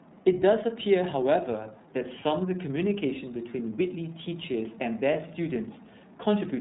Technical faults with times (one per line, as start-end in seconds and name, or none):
0.00-6.61 iLBC codec